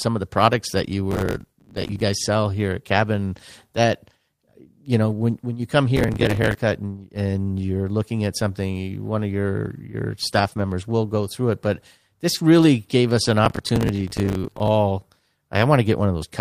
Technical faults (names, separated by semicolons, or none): processor overload crackle; lost packet rebuilt from error correction; short concealed packet loss